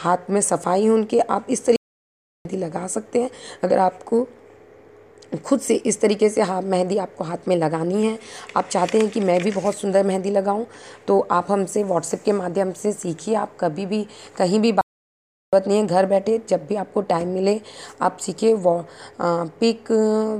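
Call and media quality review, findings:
Playback stall: audio halts at 1.76–2.45 s (0.69 s) and 14.81–15.53 s (0.72 s), then resumes; likely player buffer underrun or blocked output thread.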